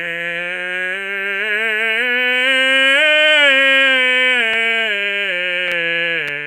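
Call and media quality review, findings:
No findings: the music clip shows no faults in this call and media quality review.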